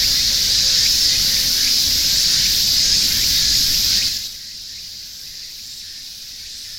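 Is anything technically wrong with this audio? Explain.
Yes. From 3.99 to 4.37 s there is zipper noise. A level drop of roughly 15 dB is applied in coarse, unsmoothed jumps of 4 dB each, about ten times a second, rather than as a continuous ramp. Each jump is an abrupt discontinuity in the waveform, so every step produces a small click. Together these form a brief ticking, zipping texture riding on the sound as it fades.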